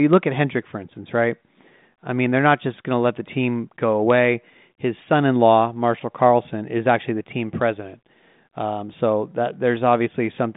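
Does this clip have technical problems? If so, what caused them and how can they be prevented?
No, there are no technical problems to report in this speech clip. It carries the narrow telephone band of G.726 ADPCM at 40 kbit/s, about 150 Hz to 3.7 kHz with nothing above 3.8 kHz, and the coding leaves at most a faint trace on the sound.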